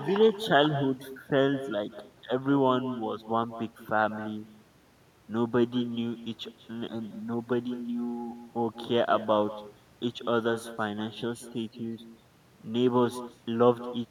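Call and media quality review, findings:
Echo with no canceller, whole clip. Speech shadowed by a thinner copy about 15 dB down, roughly a fifth of a second late. Far end's loudspeaker feeding its mic, nothing cancelling it, so our side returns after the network round trip.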